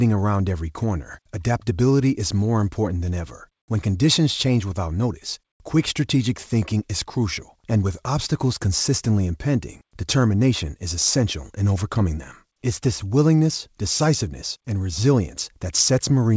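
No technical faults can be heard in this speech recording. It has passed through a WebRTC call path working as intended, with nothing above 8 kHz, which fits a wideband call codec such as G.722.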